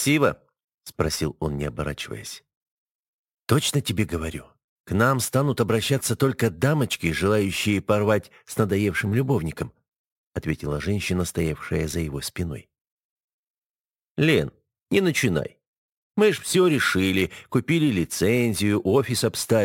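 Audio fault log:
throughout, crude rate conversion: a gritty, inharmonic fizz rides on loud and high-pitched passages, roughly 25 dB below the sound. Samples appear to be dropped rather than filtered, in a repeating pattern that fits a 48 kHz to 44.1 kHz change, producing unrelated tones.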